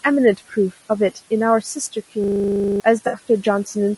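Across the whole clip the speech sounds rough and grainy, with a hiss filling the gaps between the harmonics and a thin, slightly synthetic top end. This is plainly audible low-delay AAC compression, likely from AAC-ELD at a bitrate around 32 kbps. Its short frames, about 20 ms each, cannot separate the pitch harmonics cleanly, and at this rate too few bits remain to code them. Room noise sits about 20 dB below the speech, separate from this damage.

From 2.24 to 2.8 s the sound is replaced by a buzzing stutter. A single 40 ms slice repeats about fourteen times, which produces a 25 Hz rattle. This is a system hang loop: the computer or driver stalled while the audio hardware kept replaying the same 40 ms of its ring buffer. When playback resumes, about half a second of real audio is missing.

From 3.07 to 3.17 s there is a brief smeared, noisy, phasey patch. This is AAC frame loss with concealment. 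About 60 ms of coded audio never arrived, which fits three lost frames. The decoder covered the gap by rebuilding sound from the last good spectrum with altered phase, so the patch carries roughly the right energy and tone colour but no clear detail.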